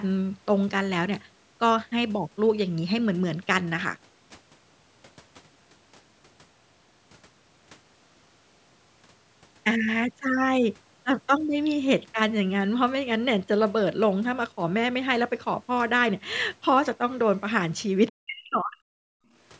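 At 18.08 to 18.12 s a brief scrap of the other side's voice leaking through can be heard, sitting very faint, roughly 35 dB under the talker's level. It is only about 40 ms long, so it registers as a blip rather than anything intelligible. The likely cause is residual loudspeaker echo that the call's echo canceller failed to subtract from the microphone signal before sending it on.

Starting at 18.11 s and running to 19.16 s, the talker's speech is suppressed in double talk. For roughly a second the voice drops away, at its deepest by around 40 dB, so parts of it all but vanish while the far end is active. This is likely the echo canceller mistaking both signals for echo when both sides spoke at once and attenuating the whole microphone path, near-end voice included. Across this passage the band-limited call sound, with nothing above 8 kHz, stays the same.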